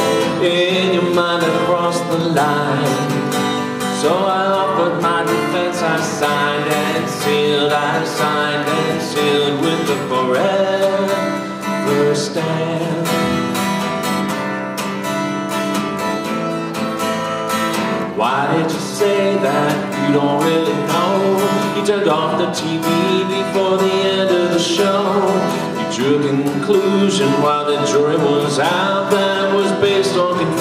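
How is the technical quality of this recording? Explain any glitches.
No glitches turn up anywhere in the recording. There is nothing here that needs explaining.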